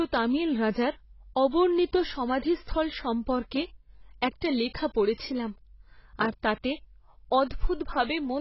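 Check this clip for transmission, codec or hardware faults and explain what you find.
AAC compression runs throughout, likely from an AAC-LC encode around 16 kbps. Nothing remains above 5.7 kHz, and the starved, patchy bands leave the speech dull and warbling with fizzy sibilants. A plain low-pass filter would cut cleanly, without this unstable smearing.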